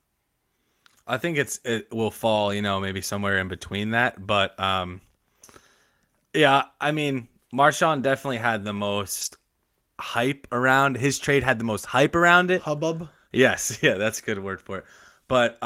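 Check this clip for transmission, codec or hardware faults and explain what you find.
The clip, which is speech, has one kind of fault: a lost packet rebuilt from error correction, heard four times. It occurs at 2.35–2.37 s, between "think it's it will" and "you know maybe somewhere"; at 4.01–4.03 s; at 7.97–7.99 s, just before "definitely had the"; and at 9.21–9.27 s, just after "definitely had the". The last one spans two packets, about 40 ms rebuilt. In each case the packet after each lost 20 ms packet carried a low-bitrate duplicate of it, and the decoder played it. The result is a brief rough, noisier patch. Unlike plain loss concealment, there is no dropout or smeared, buzzy stretch, only a momentary drop in fidelity.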